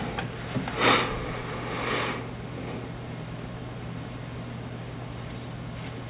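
No technical faults are audible.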